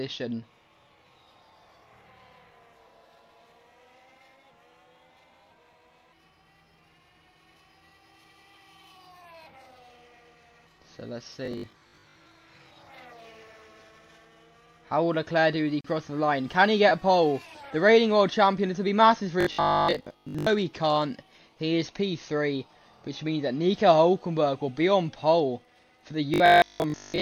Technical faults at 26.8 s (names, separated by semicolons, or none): robotic sound from repeated short buffers